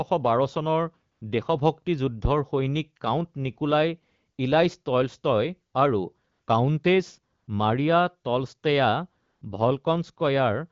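A smooth, steady hiss briefly replaces the real background from 1.11 to 1.21 s. This is AMR comfort noise: the phone judged the sound silent, stopped sending speech frames for 100 ms, and the receiver synthesised filler noise.

At 2.25 s a deep, short thump lands and dies away within about 23 ms. This phantom power thump comes from a supply switching on a live input, with the step passing through the coupling capacitors.

The same switched-in synthetic noise returns at 6.31 to 6.47 s, 7.37 to 7.47 s and 9.25 to 9.41 s, with gaps of 160, 100 and 160 ms, all carried over a clear AMR wideband (HD Voice) path whose light coding suggests a rate of at least 12.65 kbit/s.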